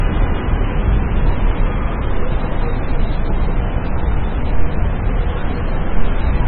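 From the first instant until 1.72 s, a doubled audio track is already running: a second full-band copy trails the original by roughly a third of a second at about 5 dB lower. It is likely a second, slower capture path. Unlike an echo or reverb tail, it carries no decay or room colour and cuts off abruptly at 1.72 s.

Throughout, the sound shows heavy MP3 compression damage. Nothing survives above 4.7 kHz, and the remaining band sounds watery and swirling, with smeared attacks, which likely points to a very low bitrate around 16 kbps. A simple low-pass filter would dull the treble without that frame-to-frame warbling.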